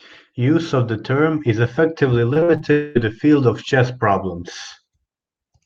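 Repeated packet loss (robotic sound) hits this speech clip from 2.33 to 2.62 s, right after "the term is effectively". Four short holes open in quick succession, the longest about 41 ms, and each is papered over by extending the sound just before it, so about a third of that stretch is synthetic fill. Repeating audio in place of real signal that often makes the passage choppy and mechanical. A long network dropout, likely the cause of what follows, runs from 2.72 to 2.97 s, before "the field of chess". For about a quarter of a second no fresh audio appears to arrive, and the gap is filled entirely by a stretched-out continuation of the last sound rather than by silence. The original material from that span is gone when normal sound resumes.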